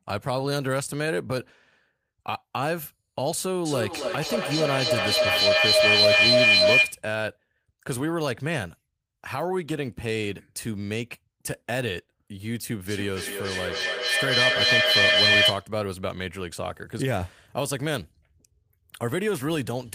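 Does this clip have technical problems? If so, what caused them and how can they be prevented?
Yes. Feedback echo between two devices runs from 3.65 to 7.07 s and again from 12.85 to 15.73 s. The speech comes round roughly every 300 ms. The repeats build up instead of fading, peaking about 9 dB and about 8 dB above the speech. Two devices in the same room share the call, so each microphone picks up the other's loudspeaker, and neither echo canceller can remove sound the other device plays. Mute all but one device in the room, or use headphones.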